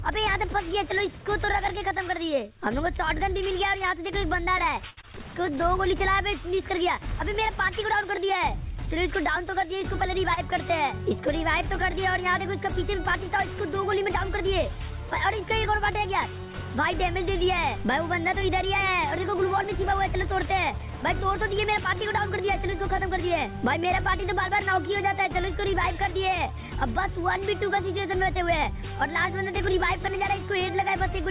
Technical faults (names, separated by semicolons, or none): short stall from a late packet; short concealed packet loss; jitter buffer speed-up